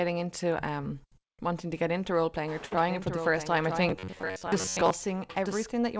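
At 2.66 s, right after "into role playing or", there is a short stall from a late packet. A packet arrived late and the jitter buffer ran dry. The receiver held the last sound for about 50 ms until the packet came, then carried on from the same point. Nothing is lost. The sound simply hangs briefly, with a slight buzz or dip, until 2.76 s. The overall delay grows by about 50 ms.

From 2.89 s to 5.69 s there is a doubled audio track. A second copy of the speech runs about one second behind the first, roughly 10 dB quieter. It is full-band, like the main signal, which is limited to 8 kHz by the G.722 call codec. It has no reverb or room tail. It starts and stops abruptly, so it sounds like a dry, out-of-step copy of the same voice. The likely cause is the same audio being captured again by a slower path.

From 3.89 s to 4.91 s there is robotic sound from repeated short buffers. The speech turns into a stiff, metallic buzz pitched at 93.8 Hz. 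It still follows the rhythm of the talking loosely. That pitch fits a buffer of about 10.7 ms being replayed. The likely cause is audio arriving too seldom, with the software looping the last buffer to fill the gaps. About half of this stretch is repeated material rather than real audio.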